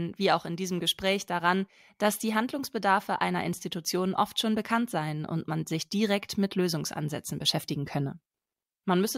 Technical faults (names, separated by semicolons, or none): none